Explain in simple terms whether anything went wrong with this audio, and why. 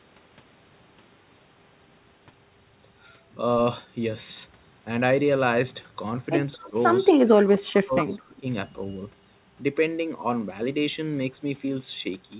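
A couple of things went wrong here, both in the back half of this speech clip.

First, an echo leak: faint repeats of the voice show up at 6.53 to 6.7 s, 7.14 to 7.2 s and 8.01 to 8.19 s, each trailing about 224 ms behind. That's likely a speakerphone whose echo canceller let some of its own playback slip back into the call.

Second, speech suppressed in double talk: the voice dips briefly around 6.58 to 6.75 s, then drops hard and cuts in and out from 7.22 to 8.48 s. With both sides talking at once, the canceller likely couldn't tell the talker from the echo, so it turned everything down.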